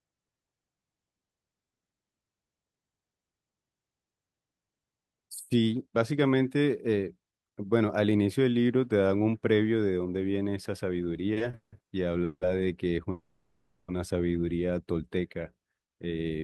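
From 11.33 to 11.74 s the speech drags and stutters through four brief stalls, the longest 170 ms, as repeated stalls (stutter): late packets kept draining the jitter buffer, so the receiver stretched the last sound for 250 ms in total and nothing was lost.

Two call audio freezes follow. At 12.24 to 12.43 s the sound holds as a fading buzz or hiss for 170 ms, ending in 50 ms of silence. At 13.11 to 13.90 s a longer fading hold lasts 770 ms and ends in 80 ms of silence. Both were likely caused by delayed packets emptying the jitter buffer, with the speech resuming where it stopped.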